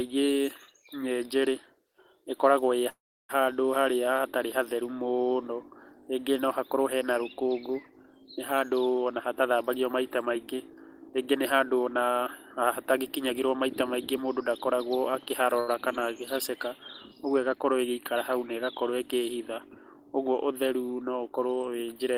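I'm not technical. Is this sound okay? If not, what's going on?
No. Around 2.89 to 3.31 s there is a call audio freeze. Incoming sound was likely held up on its way and the receiver ran out. The last sound carries on briefly, then about a third of a second of near-silence, and speech resumes where it stopped, nothing lost.

From 8.98 to 14.39 s you hear a jitter buffer speed-up. Too much sound had piled up waiting, so the receiver snipped out tiny slices, roughly 0.4 s in all. Speech runs about 7% faster, same pitch, sounding slightly rushed.

At 15.60 to 15.69 s there is a short stall from a late packet. One piece of audio arrived late, so the receiver stretched the last sound for 75 milliseconds until it came. A sound is held a touch too long, with a slight buzz or dip, but nothing goes missing.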